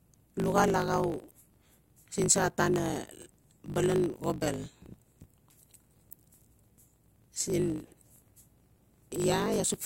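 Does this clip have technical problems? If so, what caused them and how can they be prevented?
Yes. A block size mismatch (truncated) runs through the whole speech clip. Each stage passes longer blocks than the next accepts, which fits 1024-sample blocks, so every block's tail is dropped. The cuts create a 50 Hz buzz and make the speech run 1.16 times fast at roughly normal pitch. Matching the block sizes configured at both ends of the handoff prevents it.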